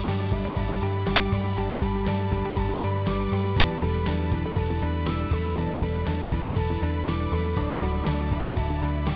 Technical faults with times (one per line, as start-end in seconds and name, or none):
0.04-0.76 sound chopped by the voice detector
1.16-1.20 uninitialised buffer
1.70-1.82 sound dropped by the voice detector
2.50-2.84 sound chopped by the voice detector
3.60-3.64 uninitialised buffer
3.78-3.82 sound dropped by the voice detector
4.52-4.56 sound dropped by the voice detector
5.56-7.08 sound chopped by the voice detector
7.70-8.56 sound chopped by the voice detector